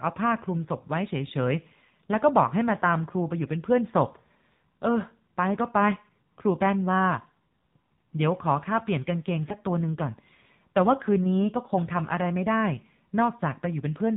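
AMR narrowband mobile codec, present from start to end: the speech is squeezed into an 8 kHz sampled, vocal-tract model coder, so nothing above 4 kHz survives. The plainly buzzy, synthetic quality points to a low rate near 7.4 kbps.

AMR bit errors, from 9.48 to 9.54 s: flipped low-priority bits slipped past the frame checksum, misplacing the excitation pulses and skewing pitch, gain and spectral detail. Level and pitch hold, but the sound turns hoarse and gargly, consistent with two damaged frames at roughly 7 percent bit errors.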